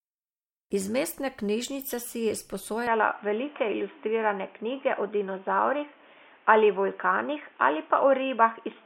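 From 2.87 s, after "mestne knjižnice si je", the speech abruptly loses everything above 3.6 kHz, shifts in level and gains faint new noise, likely an input switched to a poorer device rather than a filter.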